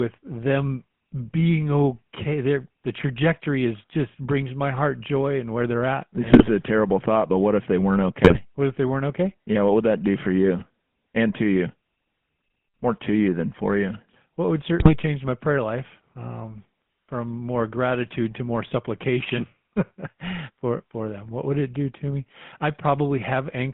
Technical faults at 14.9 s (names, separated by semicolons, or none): GSM full-rate codec; GSM bit errors